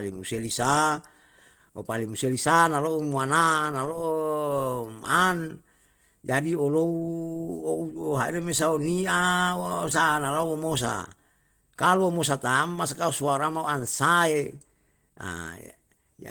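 Opus compression runs throughout: the speech sounds plainly hoarse and grainy, likely Opus hybrid mode at a rate near 16 kbps, which fills starved bands with noise.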